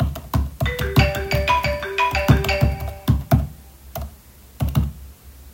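No technical faults turn up anywhere in this recording of sounds. There is nothing here to mark or explain.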